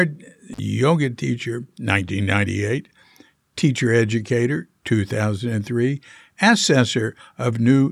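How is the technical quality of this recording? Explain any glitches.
The recording has one clear glitch, an intermittent contact early in the clip, from about 0.53 to 0.59 s. A loose cable or plug in the signal chain briefly lost its connection and stayed open for about 42 ms before reseating. On the recording, the speech drops out abruptly for that short stretch, with crackle where the contact breaks and where it closes again. While the line is open, a faint hiss remains.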